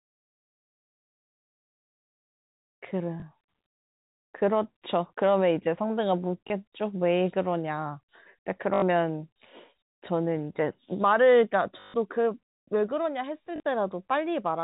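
Packet loss with the last packet repeated occurs at 3.20–3.22, 6.48–6.50, 8.74–8.82, 11.80–11.94 and 13.56–13.60 s. The receiver replays the previous chunk until fresh audio arrives. The 80 and 140 ms runs buzz at about 50 Hz, which fits 20 ms packets, and they sound like a brief robotic stutter over the narrowband telephone sound.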